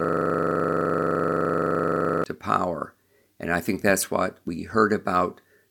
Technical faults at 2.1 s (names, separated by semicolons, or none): system hang loop